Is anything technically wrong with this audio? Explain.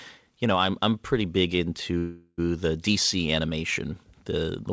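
Yes. From 1.98 to 2.40 s, just after "I'm I'm pretty big", there is a call audio freeze: delayed packets likely emptied the jitter buffer, so the receiver stretched the last sound into a fading buzz ending in about 40 ms of silence. The speech then resumes intact, now about 0.4 s late. The G.722-style call path limits everything to below 8 kHz.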